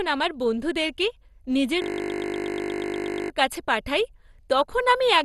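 Speech that sounds dull and gurgling throughout, with a granular edge on the voice and nothing above about 12.2 kHz. This is likely MP2 compression at a low bitrate, roughly 64 kbps, where the upper sub-bands get switched off and the remaining ones are coarsely quantised. From 1.82 to 3.3 s the speech gives way to a steady 50 Hz buzz. This is a system hang loop: with the system frozen, the sound hardware kept replaying the same 20 ms of buffered audio dozens of times over, and about a second and a half of speech is lost.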